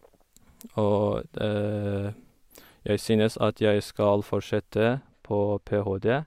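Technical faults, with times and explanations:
4.88 to 6.27 s: de-emphasis applied wrongly. For the last stretch of the speech, a treble cut meant to undo pre-emphasis lands on audio that never had any boost, so the top end rolls off smoothly, about 11 dB down at 10 kHz relative to 1 kHz, leaving the sound dull and muffled.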